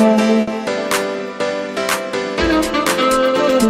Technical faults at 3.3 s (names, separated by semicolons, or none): none